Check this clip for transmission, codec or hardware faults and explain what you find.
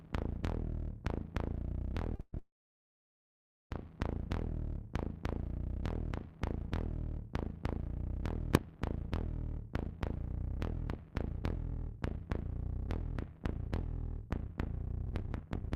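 Four kinds of fault are present, clustered around 2 to 4 seconds, with a single bang near 8.5 seconds and a speed change running to the end.

Short stall from a late packet, 2.15 to 2.21 s: one packet arrived late and the jitter buffer ran dry, so the receiver stretched the last sound for about 32 ms before resuming from the same point. Nothing is lost; the sound just hangs slightly too long.

Call audio freeze, 2.21 to 2.35 s and 2.39 to 3.73 s: this is likely packets held up in transit, leaving the buffer empty. The last sound is continued and fades, reaching silence for about 40 ms in the first freeze and about 1.2 s in the second. The audio then picks up where it stopped, inserting roughly 120 ms and 1.32 s of delay.

Invalid numbers at full scale, 8.55 s: a calculation produced infinite or invalid values across a 64-sample block of about 1.45 ms, pinning the output at full scale. A block that short is heard as one sharp, very loud bang.

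Jitter buffer speed-up, 9.88 to 15.72 s: with surplus audio queued, the receiver trims many short pitch-period slices to shrink latency, removing around 0.7 s in total. Playback runs at about 110% speed with unchanged pitch, so the sound comes across as hurried.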